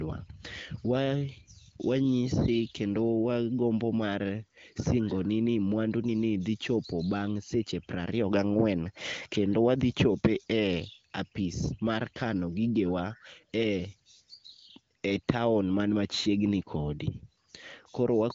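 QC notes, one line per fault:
No faults found in this speech clip. It comes through the AMR wideband (HD Voice) codec with little or no audible codec damage and nothing above about 7.4 kHz, which fits one of the higher AMR-WB rates, around 18 kbit/s.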